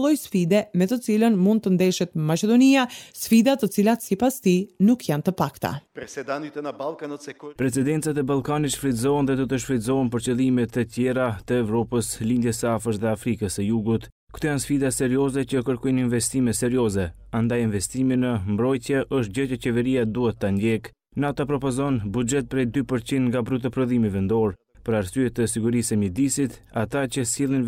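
Nothing here goes wrong technically; the audio just runs along without a single glitch, dropout or stumble worth pointing to.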